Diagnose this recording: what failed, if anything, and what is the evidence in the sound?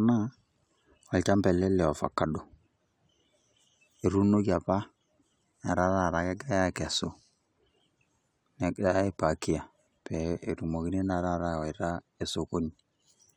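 No failure can be heard at any stage from capture through playback, and the speech gives no evidence pointing to one.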